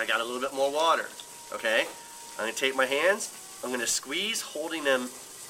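At 1.57 to 1.60 s and again at 3.25 to 3.28 s, compressed frames are skipped: the sound jumps forward by around 40 ms, which fits two missing 20 ms frames.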